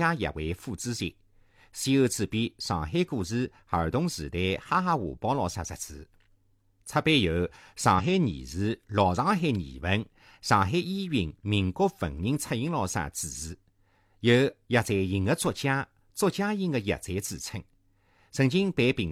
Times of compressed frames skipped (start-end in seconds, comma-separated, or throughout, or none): 7.94-8.05